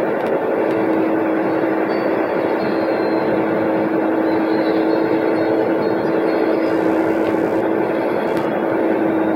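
From 6.66 s to the end, computer load shifts the shared audio ground, causing computer activity noise: a faint buzz pulsing roughly 70 times a second.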